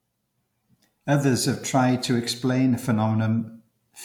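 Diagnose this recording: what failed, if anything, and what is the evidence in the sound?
Nothing failed; no fault is audible anywhere in this recording.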